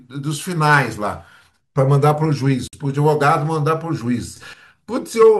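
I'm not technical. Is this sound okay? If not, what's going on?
No. At 2.68 seconds the speech drops out for about 54 milliseconds, a gap at a join of encoded pieces. Two separately encoded chunks were glued together without trimming the bit of silence each one carries, so you hear a brief hole before the speech carries on.

Then from 4.36 to 4.53 seconds there's a sudden gain jump: the speech and the background noise get noticeably louder together, all at once. The likely cause is a volume setting that got switched instantly instead of being eased in.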